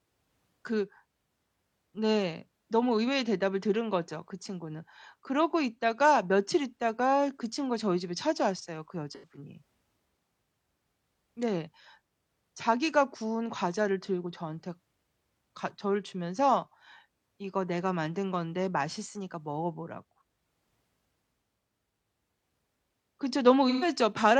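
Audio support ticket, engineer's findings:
AAC frame loss with concealment, 9.15 to 9.31 s: about 85 ms smeared, noisy patch in the speech, consistent with two lost frames. Decoder repeating last good spectrum with scrambled phase. 23.69 to 23.88 s: same, about 128 ms, consistent with three frames. Differs from a plain dropout: the gap isn't silent or clicked, it's filled with a phasey, noise-like continuation of the preceding sound.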